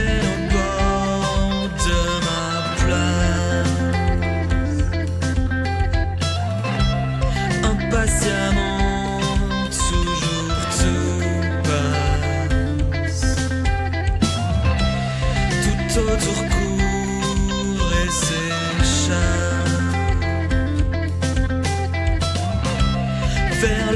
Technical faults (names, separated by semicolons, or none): none